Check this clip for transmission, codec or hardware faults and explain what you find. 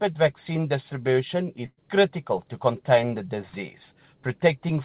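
One transmission fault is audible: a burst of packet loss from 1.66 to 1.79 s. Several consecutive packets never arrived in time, so the receiver filled about 111 ms by repeating and fading the last received sound, which ends in about 40 ms of silence. Playback then resumes 120 ms further into the audio, skipping that stretch. On a waveform, a repeated, decaying cycle flattens to zero. A spectrogram shows smeared, static bands, a dark gap, then an abrupt restart. The whole clip is cut off at 4 kHz, consistent with narrowband G.711 mu-law.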